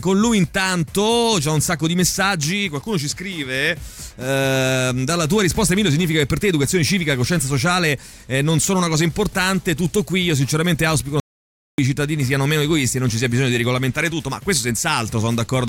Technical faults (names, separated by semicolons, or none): audio dropout to silence